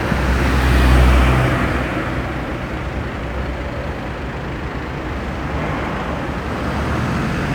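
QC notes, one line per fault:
No faults heard in these sounds.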